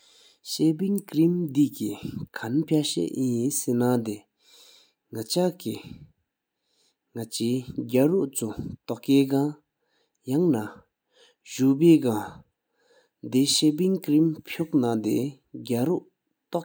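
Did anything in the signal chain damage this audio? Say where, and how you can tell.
No, nothing along the chain from capture to playback has left an audible mark on this speech, and the signal comes through intact.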